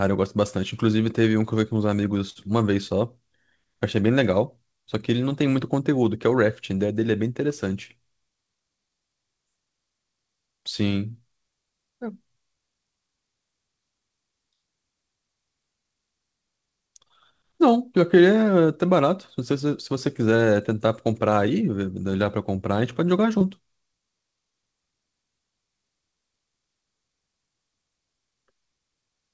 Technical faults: burst of packet loss; short concealed packet loss

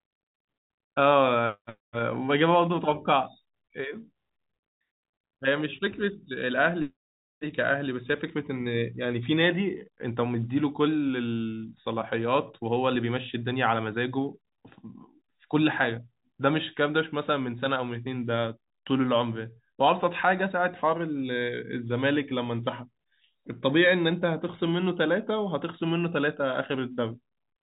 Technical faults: none

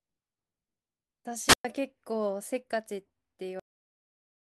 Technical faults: wireless microphone squelch dropout; cut-off end

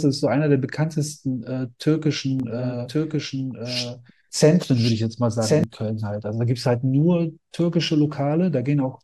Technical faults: doubled audio track

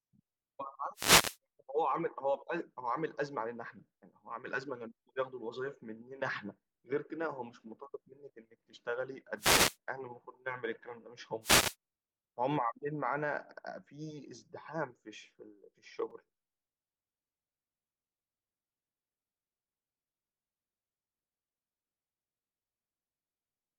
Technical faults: wireless microphone noise hit; repeated buffer

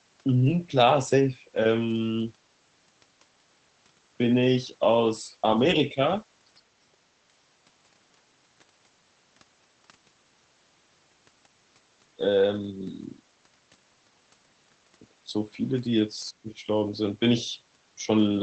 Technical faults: lost packet rebuilt from error correction; speech suppressed in double talk

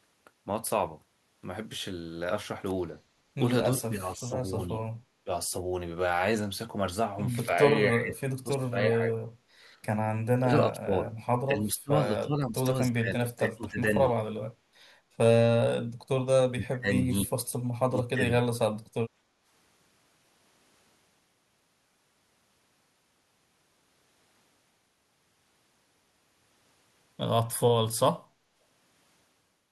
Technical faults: speech suppressed in double talk; background gated by the echo canceller

